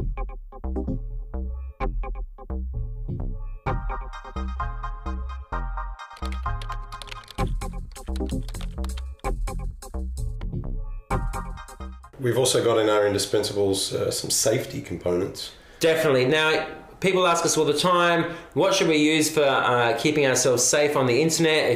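Nothing stood out as a technical fault on listening to the clip.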